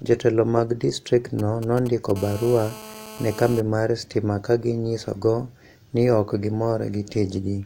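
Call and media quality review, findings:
GSM signalling bursts, 1.39 to 2.12 s: galloping dit-dit-dit ticks with short buzzes repeating at 217 Hz, around 15 dB below the speech. A nearby 2G handset's idle signalling radio bursts are rectified in the analogue audio front end.

GSM phone buzz, 2.16 to 3.61 s, ending just before "mar stima ka ginyisogo": continuous raspy 217 Hz buzz, harmonic-rich, about 16 dB below the speech. In-call handset TDMA transmission is rectified by the audio circuitry.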